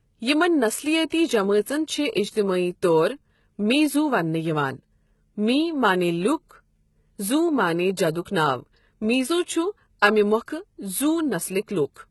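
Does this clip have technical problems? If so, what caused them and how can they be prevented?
Yes. Throughout the speech, the treble sounds synthetic: sibilants come out gritty and metallic, high harmonics don't line up with the lower ones, and the spectrum stops dead at about 11.8 kHz. This is heavy damage that likely comes from HE-AAC compression at a very low rate, consistent with roughly 16 kbps. The codec spends its bits on the lower band and rebuilds the top by spectral band replication, copying lower content upward under a coarse envelope, so the brightness is invented rather than real. To prevent it, encode at a higher bitrate or with plain AAC-LC or Opus so the treble is actually coded.

There is also pre-echo, a brief hiss that runs ahead of a sharp onset and softens its attack. The first occurrence spans 1.09 to 1.12 s, a smear of about 29 ms. The second is at 8.25 s, about 11 ms, between "زو معنی" and "ناو میٖزو". 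Each attack landed late in a transform block, and the quantisation noise sized for the loud part spread back across the quiet moment before it. To prevent it, give the encoder more bits and use one with good block switching for transients.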